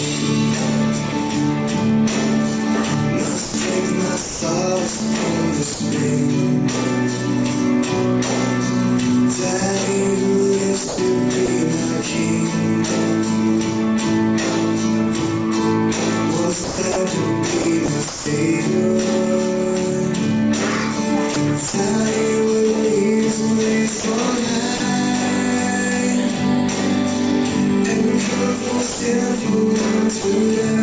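Audio carried over what sounds like a G.722 call path with nothing above 8 kHz, and it is repeatedly chopped by the voice detector, likely from gating switching on and off. It happens at 3.44–5.80, 10.88–11.48, 16.64–18.26, 21.34–21.74 and 24.00–24.80 s, where roughly 380, 120, 400, 80 and 60 ms of sound become comfort noise. Separately, sound is likely dropped by the voice detector at 28.92–29.00 s and 30.22–30.24 s, losing 80 and 20 ms to a single steady noise fill. These drops differ from the chopping because each one is one clean gap rather than repeated flicker.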